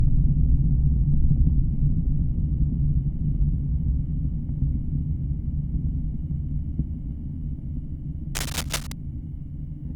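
From 8.35 to 8.94 s there's cable scratch noise, a fairly loud burst of uneven scratching, likely from a worn cable or connector being moved.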